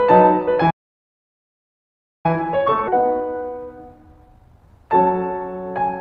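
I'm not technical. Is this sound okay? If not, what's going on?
No. Playback stall from 0.70 to 2.26 s: the music stops dead for about 1.5 seconds, then resumes. The likely cause is that the player ran out of incoming audio, or was briefly held up, and had nothing to play until it recovered.

Time-compressed catch-up from 2.26 to 4.68 s: to make up lost ground after the stall, the player trims tiny slices and blends the joins. The music runs about 1.15 times faster without changing pitch, so it sounds rushed.

Skip ahead at 2.87 s: playback jumps straight forward, and roughly half a second of music is simply gone. Later audio was already waiting, so the player dropped the stretch in between and joined the two sides with no gap.

Jitter buffer speed-up from 2.97 to 3.67 s: the receiver held more audio than it wanted and cut many tiny pieces, about 70 milliseconds in all. The music plays about 10 percent fast at the same pitch, and the beat loses its steady tempo.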